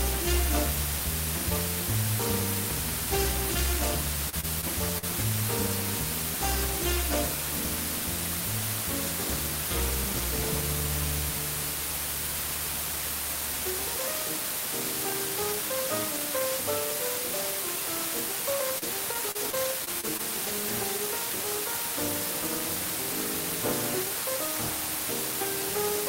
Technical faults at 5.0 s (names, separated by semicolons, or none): low bit depth with dither; repeated packet loss (robotic sound)